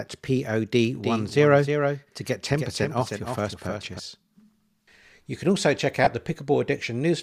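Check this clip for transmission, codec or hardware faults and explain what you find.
Two faults can be heard.

From 0.95 to 3.99 s a doubled audio track sits under the speech: a second, clean copy trails the original by around 300 ms at about 5 dB lower, giving a stuttering, out-of-step echo with no room tail. It cuts in and out abruptly at those edges. The likely cause is the same signal reaching the mix twice, once through a slower route, so one full-band copy lags by a fixed offset.

At 6.04 to 6.07 s, right after "can also check", there is a brief grainy smear lasting 22.5 ms, which fits three lost 7.5 ms LE Audio frames. The LC3 decoder covers the gap by replaying the last good spectrum with scrambled signs. The tonal detail of the speech turns into a short noisy blur before the signal resumes. The loss is too brief to fade into silence.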